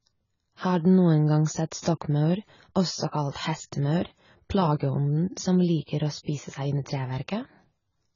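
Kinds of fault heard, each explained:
AAC compression: dull, smeared speech with nothing above 7 kHz and a warbling, fizzy texture, likely heavy AAC-LC coding at a low bitrate near 16 kbps.
Pre-echo: at 1.81 s, a short hiss precedes a sharp attack by 46 ms as quantisation noise spreads into the quiet before it, softening the onset.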